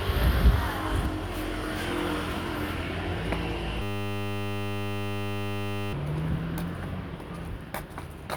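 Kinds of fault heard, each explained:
System hang loop: a frozen driver left the hardware replaying one 10 ms buffer, giving a steady 100 Hz buzz from 3.82 to 5.93 s, seen as identical repeating waveform cycles and evenly spaced harmonic lines.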